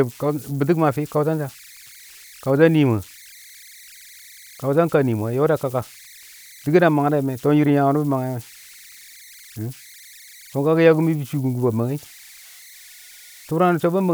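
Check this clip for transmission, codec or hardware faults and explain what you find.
One hardware fault runs through the whole speech recording: converter idle tones. Throughout the clip, a tone near 2 kHz sits in the pauses, and a grainy texture lies under the speech, at about 26 dB below the signal. An undithered delta-sigma converter given very small input settles into repeating bit patterns, and those cycles produce tones whose pitch follows the input's DC offset. Steady interference from outside the converter, by contrast, keeps a fixed pitch and does not fade in and out with the quiet passages.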